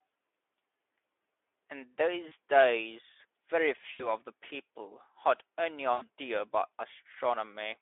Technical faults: VoIP packet loss concealed by the speech codec

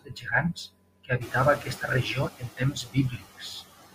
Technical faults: noise suppressor artifacts; speech cut by the noise suppressor; noise suppressor catching up

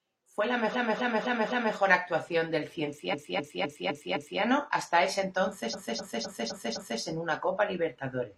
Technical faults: repeated frames

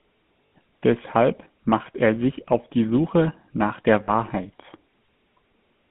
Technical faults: GSM full-rate codec; lost GSM frames

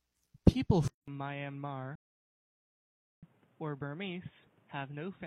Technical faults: input switched to a poorer device; rebuffering stall

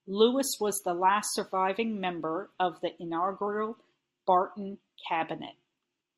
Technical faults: none

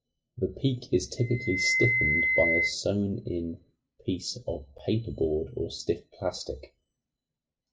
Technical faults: loudspeaker feedback squeal

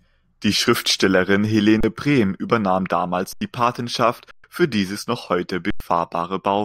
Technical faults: underrun with held sample

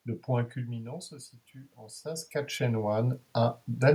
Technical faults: automatic gain rising

